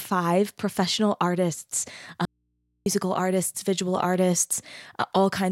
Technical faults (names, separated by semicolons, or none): audio dropout to a faint residue